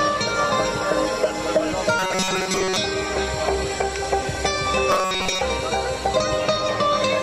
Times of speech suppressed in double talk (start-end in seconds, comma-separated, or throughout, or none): none